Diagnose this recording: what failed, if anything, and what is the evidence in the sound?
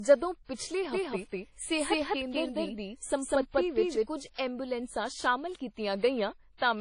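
Codec stage. WMA compression damage is plainly audible throughout. The speech sounds washy and ringing, with nothing above 10.1 kHz. The likely cause is a low-bitrate encode, fitting about 32 kbps.

There is a doubled audio track from 0.93 to 4.07 s. A copy about as loud trails roughly a fifth of a second behind. It likely comes from a second capture path or an edit.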